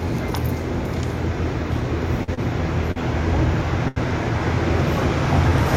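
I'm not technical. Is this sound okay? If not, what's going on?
No. At 2.23, 2.34, 2.91 and 3.88 seconds, there's a short stall from a late packet. A piece of audio arrived late, so the player briefly stretched the last sound for about 35 to 84 milliseconds, then carried on with nothing missing.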